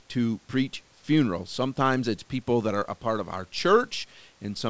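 No technical faults can be heard in this speech.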